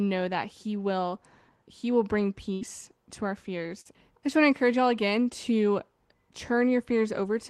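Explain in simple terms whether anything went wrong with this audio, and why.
A burst of packet loss hits at 2.53 to 2.63 s, right after "will bring" and before "to our". On a call, sound travels in small packets, and here several in a row never arrived in time. The receiver covered the hole by stretching out the last bit of sound for about 75 ms and letting it fade, which is heard as a brief held buzz or hiss. The speech then picks up again with about 80 ms simply gone.

A short concealed packet loss follows at 3.81 to 3.87 s, between "to our" and "I just want". This time only about 40 ms went missing. The receiver patched it by continuing the sound it had just played and then blending back into the real audio, so the gap is heard as a quick smear or wobble rather than a silence, and a small piece of speech there can slip away.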